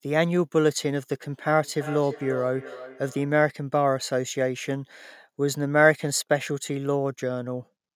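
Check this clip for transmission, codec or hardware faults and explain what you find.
One fault is present: feedback echo between two devices, from 1.62 to 3.4 s. Two devices in the same room share the call. One plays what the other's microphone sent, and that microphone picks it up again. Each device's echo canceller removes only its own playback, so this loop escapes it. The speech comes back at a steady interval of roughly a third of a second. The loudest repeat sits about 14 dB below the speech.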